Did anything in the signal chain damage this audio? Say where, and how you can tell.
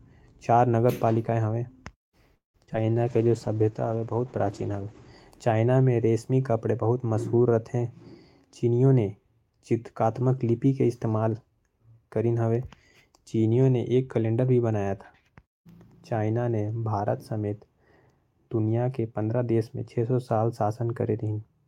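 Yes. At the network stage, repeated packet loss (robotic sound) hits from 2.35 to 2.76 s: four holes, the longest 186 ms, with about half that span patched by stretching the previous sound. The choppy gaps separate it from a smooth tempo change.

Right after, from 2.81 to 3.55 s, a jitter buffer slow-down in the receiver repeats pitch periods to rebuild its reserve, adding 79 ms. The speech plays at 90% speed with unchanged pitch, drawn out rather than broken up like the loss before it.

At the codec, a call bitrate drop runs from 3.09 to 5.18 s. Opus falls from 48 to 12 kbps for 1.86 s, and bandwidth shrinks from 20 kHz to 8 kHz. The sound turns muffled and rough without any change in timing, unlike the buffer faults.

A jitter buffer speed-up appears twice. From 8.64 to 9.01 s it runs at 127%, and from 9.43 to 10.66 s at 106%, each time cutting roughly a tenth of a second of pitch periods. 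Speech hurries at the same pitch, the mirror image of the earlier slow-down.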